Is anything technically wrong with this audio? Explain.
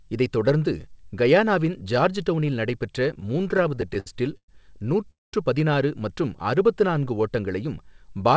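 Yes, there are three playback faults in this speech, all from packets arriving unevenly.

Repeated stalls (stutter) run from 3.14 to 4.49 s. Packets kept arriving late, so the jitter buffer ran dry about sixteen times, and each time the receiver stretched the last sound until data caught up. These fills add up to 313 ms, with the longest near 111 ms, so roughly a quarter of that stretch is concealment. Nothing is lost, but the speech limps forward in a halting, dragging stutter.

A call audio freeze sits at 5.11 to 5.34 s, just before "பதினாறு மற்றும்". The sound halts for 218 ms: a brief carried-over tail of the last sound, then about 190 ms of near silence, before speech resumes exactly where it stopped. The likely cause is packets held up in transit, emptying the jitter buffer so the receiver had nothing to play. The gap pushes everything after it later by the same 218 ms.

A jitter buffer slow-down follows from 6.42 to 7.22 s, right after "பதினாறு மற்றும்". 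Running short of reserve, the receiver repeated single pitch cycles and slivers of pauses to rebuild its cushion, inserting 80 ms in total. Speech there plays at about 91% of normal speed with unchanged pitch, so syllables sound slightly drawn out. The band-limited tone, with nothing above 8 kHz, comes from the G.722 call codec rather than from these faults.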